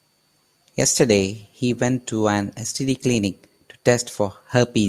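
Listening to this short speech recording, nothing technical stood out anywhere in it.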